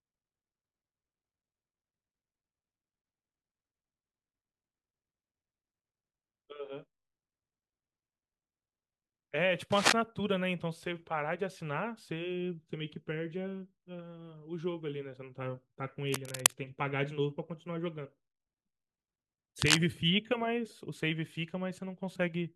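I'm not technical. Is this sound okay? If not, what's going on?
No. There are three bursts of cable scratch noise, a brief scratchy rustle over the speech at 9.72 to 9.93 s, 16.07 to 16.54 s and 19.60 to 19.81 s. The likely cause is a worn cable or connector being moved.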